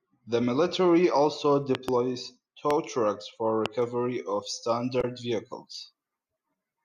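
At 1.75 to 1.91 s, just after "military also", two loud pops land in quick succession, peaking roughly 15 dB above the speech, which continues underneath. A single pop of similar level follows at 2.71 to 2.73 s, just before "trucks for", and another at 3.66 to 3.68 s. Each is a brief electrical transient added to the signal and shaped by the following circuitry, likely from a connector, switch or static discharge.

From 3.82 s, right after "trucks for", to the end of the clip, pre-emphasis is left on. The treble lift matches a 75 µs FM curve, but the complementary de-emphasis was never applied. The top end sits about 13 dB hotter at 10 kHz than at 1 kHz, so the speech turns thin, bright and sharply sibilant, with fricatives and consonant edges pushed well forward.

At 4.98 to 5.05 s there is damaged data in a compressed stream. A short run of corrupted frames leaves the decoder unable to parse that stretch, so it loses sync and hunts for the next valid frame header. 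The result is a brief glitch in the speech.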